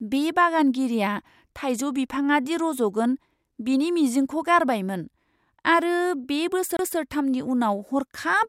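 A CD skip occurs at 6.77 to 6.79 s. A knock or a flaw on the disc knocked the laser off its track onto another turn of the spiral, so the player briefly mutes and then resumes reading from a different point. In this speech clip the effect is a very short silence of around 30 ms, followed by the speech continuing abruptly from a displaced position.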